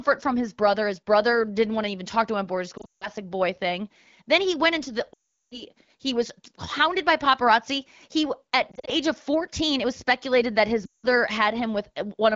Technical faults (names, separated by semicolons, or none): lost AMR speech frames